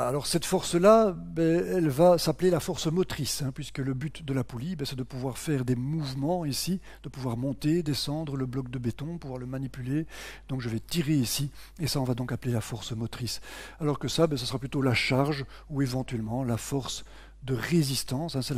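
From start to finish there's mains hum, a steady low drone sitting at 50 Hz, roughly 25 dB below the signal. It's the power line bleeding into the audio path, most likely through a ground loop or a transformer parked too close to the gear.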